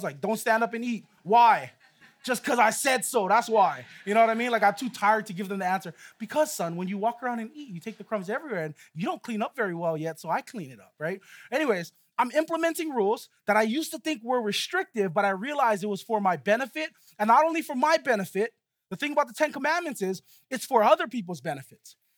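No technical faults can be heard anywhere in the audio.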